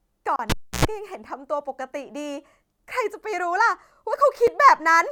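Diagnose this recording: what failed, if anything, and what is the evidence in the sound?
The speech drops to dead silence for 32 ms at 0.36 s and for 5 ms at 4.47 s, then resumes. These gaps point to the playback link, most likely a Bluetooth stall: radio interference delayed packets, the headphone buffer emptied, and audio waited for retransmissions.

From 0.50 to 0.85 s there is a pop, about 300 ms of near silence, a 95 ms burst of 60 Hz mains buzz, then a second pop as sound returns. This is an analogue wiring fault: a live cable pulled and plugged in, humming while only the tip made contact.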